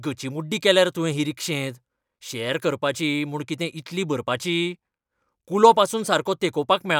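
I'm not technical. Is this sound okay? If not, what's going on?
Yes, nothing wrong can be heard in this recording.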